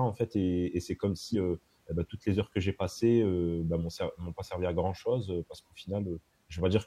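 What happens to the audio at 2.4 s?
Nothing goes wrong at 2.4 s; the speech carries on intact through that moment, with no dropout, click or other fault.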